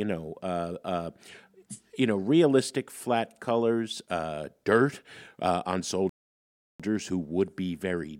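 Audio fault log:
6.09–6.80 s, playback stall: the speech just drops out for about 0.7 s, flat silence right in mid-flow, then carries on. Most likely the player ran dry of data or its thread got blocked, so nothing reached the output until it recovered.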